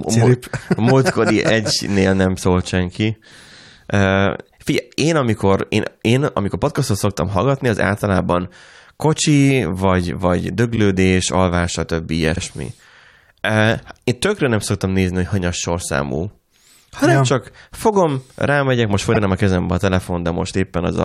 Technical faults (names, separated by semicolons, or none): repeated frames